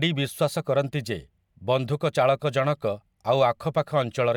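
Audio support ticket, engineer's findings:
No faults found in this recording.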